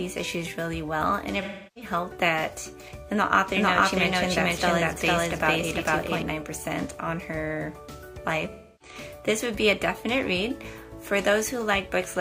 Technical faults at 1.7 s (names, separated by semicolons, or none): AAC frame loss with concealment